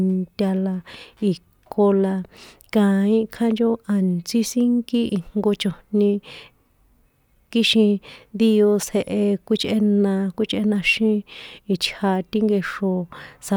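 No technical faults detected.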